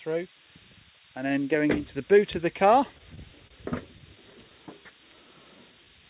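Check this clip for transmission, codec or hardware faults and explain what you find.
Four faults stand out, riding on a call path whose band stops at 4 kHz, which fits G.711 mu-law at 64 kbps.

Switching supply whistle, throughout: a thin, high whistle wanders between 7.84 and 8.18 kHz, sitting around 10 dB below the programme. A switching power supply running in an audible burst mode, or beating against another supply, produces that drifting tone.

Short stall from a late packet, 3.47 to 3.52 s: the sound hangs for a moment, one slice held about 29 ms too long. A packet arrived late, the jitter buffer ran dry, and the receiver stretched the last audio until it came. Nothing is lost, but playback now runs 29 ms later.

Scattered short gaps, 3.98 to 4.70 s: about five brief ticks and smears, none longer than roughly 10 ms, together around 50 ms patched. Isolated packets went missing or came late. 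Each hole was filled by continuing the preceding sound, so the audio stays intact but hiccups.

Jitter buffer slow-down, 4.82 to 5.86 s: the audio drags at 93% speed with unchanged pitch, sounds drawn out, adding 80 ms. The buffer was rebuilding its reserve by repeating single pitch periods and fragments of pauses many times over.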